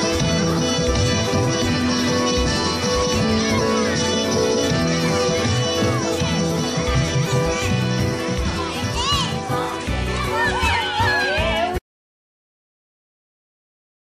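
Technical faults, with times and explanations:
11.79–14.13 s, audio dropout to silence: input was likely lost while recording continued writing silence, so the sound cuts off mid-flow into complete silence, without room tone, until the end.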